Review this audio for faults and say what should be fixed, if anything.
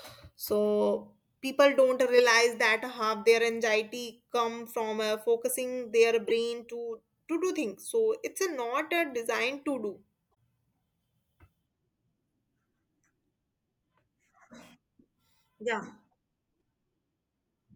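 Corrupt frame decoded, at 2.18 to 2.20 s, 6.28 to 6.31 s and 10.33 s. Flipped bits in the compressed speech stream were played anyway, so misread gains and codes put energy at the wrong frequencies for the span of each damaged frame. The first two are short bursts of wrong-frequency sound, peaking around -15 and -20 dBFS. The third is faint, near -60 dBFS. Unlike a dropped frame, which leaves a gap or a smeared repeat, these add new, unrelated sound. Adding checksum or CRC checks on each frame, so damaged frames are concealed rather than decoded, would prevent this.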